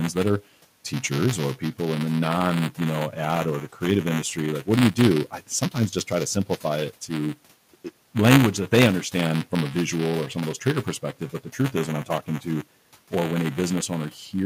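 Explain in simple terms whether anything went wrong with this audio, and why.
Two things went wrong. The first is buffer tearing, which runs through the whole recording as a steady robotic buzz at 200 times per second, heard only while someone is talking. The program writing audio and the hardware reading it have slipped out of step, so a small slice of each chunk replays sound from about a hundredth of a second earlier, with an abrupt join on each side.

The second is speech cut by the noise suppressor, from 3.73 to 3.82 s and from 5.26 to 6.11 s. In those spots the suppressor mistook quiet parts of the speech for background noise and turned them down, so those bits sound swallowed or faint. The faint room noise in the background is simply part of the recording.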